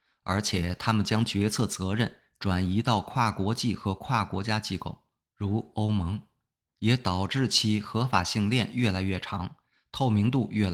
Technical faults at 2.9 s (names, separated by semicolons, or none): none